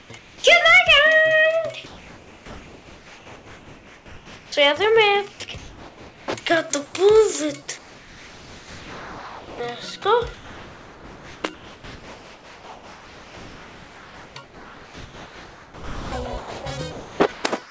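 The audio passes through a call path with nothing above 8 kHz, which fits a wideband codec such as G.722. It carries several switching faults. Comfort noise in place of the background appears at 0.00–0.44 s, 1.86–4.52 s, 5.32–6.28 s and 6.86–6.94 s: the real background gives way to a steady, featureless hiss, about 3 dB quieter in the second span and about 5 dB quieter in the last, likely because the sender stopped transmitting during pauses and the receiver synthesised noise instead. The onset is clipped by the voice detector at 4.48–4.52 s, where 40 ms of the start is missing and the sound begins abruptly, likely because the detector was slow to reopen. Sound is dropped by the voice detector at 5.32–5.40 s, losing about 30 ms, and at 7.78–9.60 s, losing about 0.83 s: quiet material was likely taken for background and replaced by steady noise until transmission resumed. From 10.34 s to the end, the sound is chopped by the voice detector, which likely toggles repeatedly, so edges and quieter passages drop out.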